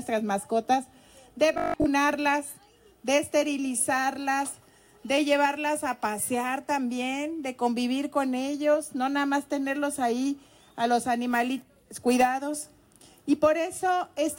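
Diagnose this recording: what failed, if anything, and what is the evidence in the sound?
From 1.54 to 1.86 s the sound turns into a rigid, metallic buzz pitched at 50 Hz, a robotic sound from repeated short buffers at the driver or buffer stage. The likely cause is audio arriving too seldom, so the software replays the last 20 ms to fill gaps while most of the real signal in that span is skipped. A waveform shows near-identical 20 ms segments back to back, and a spectrogram shows harmonics spaced every 50 Hz.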